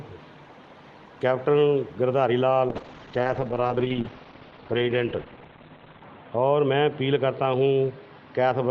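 A call bitrate drop begins at 2.69 s and lasts to the end of the audio. The sound turns coarse and muffled as the high frequencies vanish above 4 kHz. This fits the Opus encoder falling from about 32 kbps to roughly 10 kbps, and it stays at its lowest for 3.34 s.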